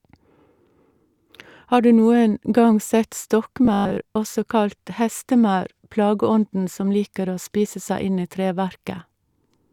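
A speech clip with one fault: robotic sound from repeated short buffers between 3.65 and 4.15 s. For that half second the voice collapses into a rigid, metallic buzz at 50 Hz that only loosely tracks the speech. The likely cause is audio arriving too slowly, so the playback repeats roughly 20 ms chunks to fill the gap. Most of the real signal in that stretch is skipped, and the repetition rate imposes the fixed pitch.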